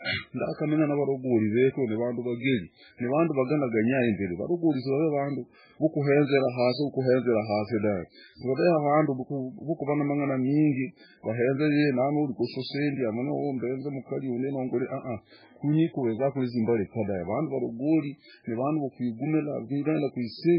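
Throughout the speech, the sound is thin and watery, with a swirling texture and nothing above 5.2 kHz. This is heavy MP3 compression, likely at a very low bitrate near 8 kbps, where the encoder drops the treble and lets weak frequency components flicker between frames.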